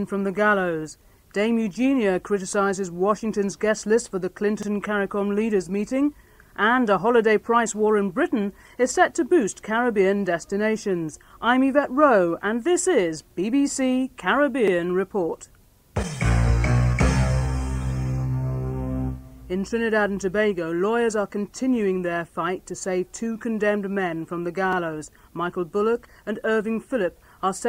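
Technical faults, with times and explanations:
4.63–4.68 s, 14.68–14.73 s and 24.73–24.78 s: overlapping chunks. The audio was handled in 10-second chunks, each starting 50 ms before the previous one ended, so that 50 ms slice plays twice at every join, heard as a brief stutter recurring every 10 seconds.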